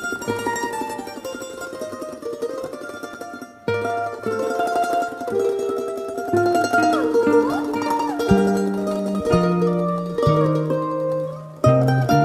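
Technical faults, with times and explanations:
3.14 s, block of digital silence: the audio drops out for 5.8 ms, a length that fits a 256-sample buffer. A run of zeros stands in for the signal, either because the output buffer was not filled in time or because a calculation produced invalid numbers. The sound stops and resumes abruptly with no fade, and a hole this short is heard as a tick or dip rather than as silence.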